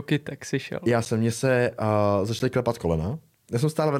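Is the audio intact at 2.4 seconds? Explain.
No, not quite. Right after "mě se uh" there's a block of digital silence at 2.39 s, about 10 ms long. That stretch of samples has been zeroed out, so the speech drops straight to dead silence and comes straight back with no fade. At only 10 ms it doesn't read as a gap so much as a tick or dip.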